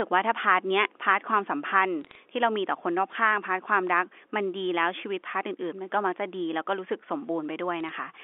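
From 2.01 to 2.15 s and again from 7.80 to 7.89 s, bit errors on the digital phone line corrupt individual G.711 samples. Flipped sign or high-order bits produce sharp ticks, heard as brief crackle over the band-limited speech.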